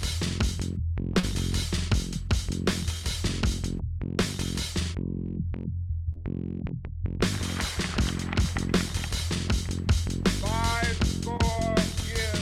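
Short concealed packet loss occurs three times, at 1.19 to 1.25 s, 6.13 to 6.17 s and 11.37 to 11.41 s, where about 40, 20 and 20 ms of audio went missing and the receiver patched each gap by extending the preceding sound. On a spectrogram each shows as a brief smeared or repeated patch blending back into normal detail.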